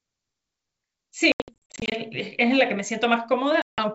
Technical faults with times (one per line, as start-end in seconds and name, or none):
1.32-1.93 packet loss on an ADPCM call
3.62-3.79 packet loss on an ADPCM call